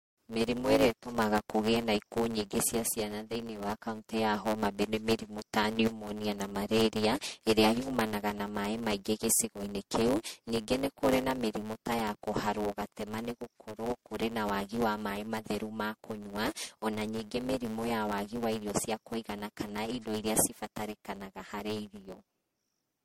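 Block size mismatch (truncated) runs through the whole speech recording. One stage hands over blocks longer than the next stage takes in, and the leftover tail of every block is discarded. Those regular cuts produce a steady buzz at 109 Hz, the rate at which blocks are chopped. Because a slice of each block is missing, the speech plays 1.09 times faster than it should, yet its pitch stays about where it belongs.

Generation loss is also present from start to finish. The speech sounds swirly, smeared and hollow, with consonant attacks blurred and nothing above 16.6 kHz. That degradation is worse than a single encode at this quality would leave. The likely cause is repeated lossy coding, about four passes through MP3 at roughly 75 to 80 kbit/s. Each pass requantises on a shifted frame grid, so the noise and spectral gaps pile up.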